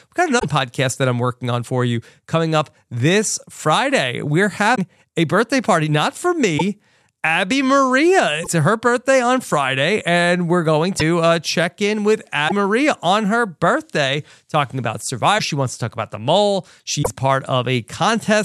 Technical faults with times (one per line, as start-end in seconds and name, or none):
0.38-0.45 broken MP3 bit reservoir
4.74-4.79 broken MP3 bit reservoir
6.57-6.62 broken MP3 bit reservoir
8.43-8.47 broken MP3 bit reservoir
10.99-11.02 broken MP3 bit reservoir
12.47-12.52 broken MP3 bit reservoir
15.37-15.40 broken MP3 bit reservoir
17.02-17.08 broken MP3 bit reservoir